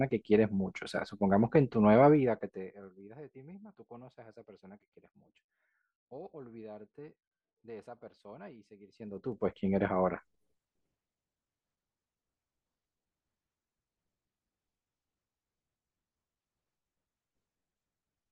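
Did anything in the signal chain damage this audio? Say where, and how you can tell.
Yes, there's zipper noise from a gain stage working per buffer. From 2.07 to 3.14 s the level drops by about 25 dB, and from 8.79 to 9.58 s it climbs back by about 25 dB. During both moves you can hear a fine ticking riding on the speech, around fifty ticks a second. That fits the gain being updated once per roughly 20 ms buffer with no smoothing, so each jump leaves a tiny click.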